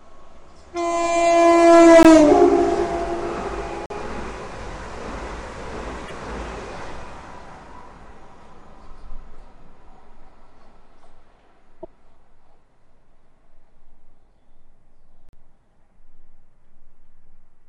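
At 2.03 s there is a block of digital silence lasting about 19 ms. The audio drops straight to silence and back with no fade. The output buffer was likely not filled in time. At 3.86 to 3.90 s a longer block of digital silence opens a short hole of about 43 ms, which fits a 2048-sample buffer. At 6.06 to 6.11 s, damaged data in the compressed stream makes the decoder lose sync. The same fault returns at 11.80 to 11.85 s. At 15.29 to 15.33 s, another 43 ms dropout cuts in and out.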